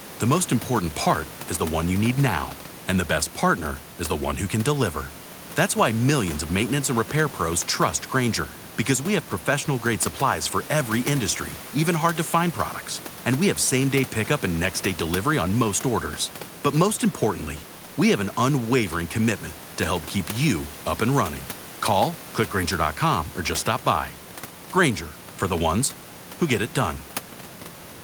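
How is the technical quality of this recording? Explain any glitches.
Nothing stood out as a glitch on listening; the only thing audible besides the speech is some background noise from the room, sitting about 20 dB below it.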